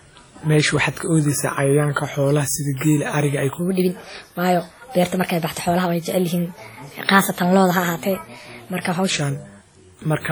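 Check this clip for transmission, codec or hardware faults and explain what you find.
Two problems in this speech clip. Throughout, there's heavy ringing, washy smear with breathing hiss, likely WMA compression, where long transform blocks spread quantisation noise; it fits roughly 32 kbps. From 3.59 to 9.10 s there's a section at the wrong speed, running 1.24 times fast, so the voice jumps up about four semitones and sounds hurried, likely from a clock mismatch.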